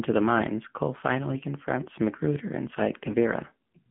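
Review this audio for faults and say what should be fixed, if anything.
The whole clip has passed through the AMR narrowband mobile codec. The speech is confined to a telephone band of roughly 150 Hz to 3.4 kHz. Nothing above 4 kHz survives. The low rate, which fits AMR-NB at 7.4 kbps, leaves the voice plainly buzzy and synthetic. The codec rebuilds speech from a vocal-tract model fed by sparse pulses, and at this rate it has too few bits to do that cleanly. To prevent it, record or route the call over a wideband path, or use a higher AMR mode.

From 3.04 to 3.15 s there are AMR bit errors. The voice keeps its pitch and level but turns hoarse and gargly for that short stretch. Some of the weakly protected bits in the frames were flipped while the core checksum still passed. Misplaced excitation pulses and wrong gain and spectral values then produce the scratchy texture. The damage points to about five consecutive 20 ms frames and an error rate of around 5 percent. 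To prevent it, improve the radio link or apply stronger error protection so that corrupted frames are concealed rather than decoded.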